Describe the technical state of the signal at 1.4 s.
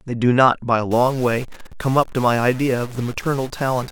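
At 1.4 s you're right in the middle of a stuck bit fault that starts at 0.91 s and runs to the end of the clip. One bit in the sample data won't change, most likely from a broken data line or converter, so about half the samples are pushed off by a step of about -35 dBFS. The speech takes on a harsh, buzzy edge, and the quiet gaps fill with a steady hiss-like noise instead of silence.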